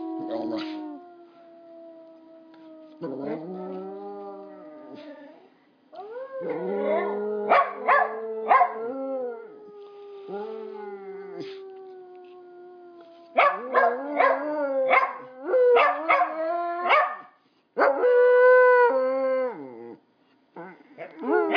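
No technical faults can be heard anywhere in this audio.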